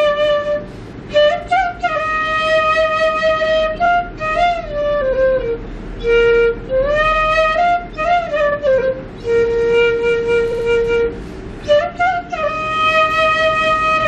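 Repeated frames occur at 3.84 s, 8.51 s and 10.51 s. Short blocks of the compressed stream play again, giving stutters of 23 ms, 46 ms and 70 ms, with the last block heard twice more. The audio runs 0.21 s longer in total.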